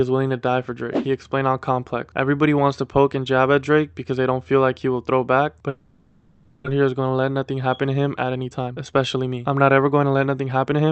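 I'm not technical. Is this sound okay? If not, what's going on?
No. From 5.69 to 6.68 s the sound breaks into a buzzy, fading hiss, and when it returns about 0.6 s is simply gone. This is most likely a long network dropout: the connection stalled, so the receiving end papered over the gap and then skipped ahead.

From 8.34 to 10.88 s the sound plays noticeably rushed, about 13% faster but at the same pitch. This is a jitter buffer speed-up. After the stall, the receiver had built up a backlog and caught up by quietly trimming out roughly a third of a second.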